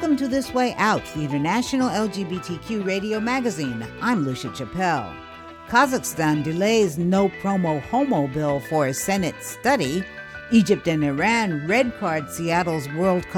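No technical faults can be heard in this clip.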